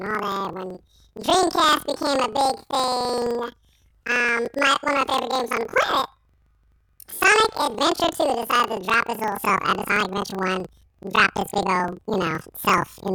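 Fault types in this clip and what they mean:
Planar audio read as interleaved: each 43 ms block, which fits 2048-sample blocks, stores all left samples then all right, but gets read as alternating pairs. So each block plays twice at double speed, and the speech comes out an octave high with a 23.4 Hz flutter.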